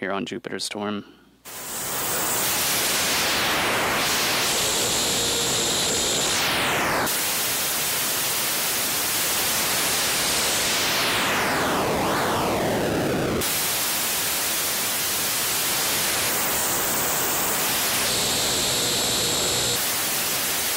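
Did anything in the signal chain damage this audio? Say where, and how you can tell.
No, nothing in the signal chain damaged this audio.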